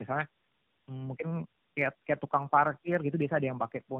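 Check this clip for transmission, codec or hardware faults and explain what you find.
Two faults: the speech has been through tandem speech coding for its whole length, and a steady train of clock slip clicks runs from 0.12 s to 3.99 s.

Tandem speech coding runs throughout. The sound is rough, muffled and warbly, which fits three AMR-NB coding passes, with G.711 A-law links between them and rates around 10 to 12 kbit/s. Each coder re-encodes the previous one's damaged output, so the errors stack. On a spectrogram, nothing appears above 3.6 kHz. Formants look smeared and blotchy, and harmonics break up in uneven frame-sized patches.

The clock slip clicks run from 0.12 s to 3.99 s, about every 20 ms, so roughly 50 per second and around 150 in all. They are heard as a soft, regular rattle under the speech, strongest on loud sustained sounds and absent in pauses. The likely cause is two devices running on unsynchronised clocks about 0.1% apart, so a single sample is dropped or repeated each time the drift adds up to a whole sample. 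A zoomed waveform shows tiny one-sample steps at even spacing. A spectrogram shows faint, evenly spaced vertical lines through the voiced parts.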